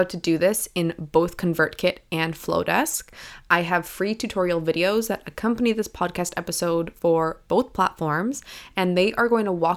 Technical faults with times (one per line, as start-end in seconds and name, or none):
none